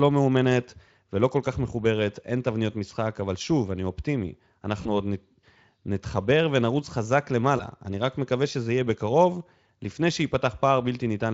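At 4.81 s the speech briefly smears into a buzzy tone or a coloured noise that fades, and at 7.57 s a shorter version recurs. Both are VoIP packet loss concealed by the speech codec. Through the Speex stream, about 40 ms went missing at the first point, which fits two 20 ms frames, and about 20 ms at the second. The decoder stretched its last pitch and filter while lowering gain, so the sound stays weakened until about 4.87 s and 7.64 s.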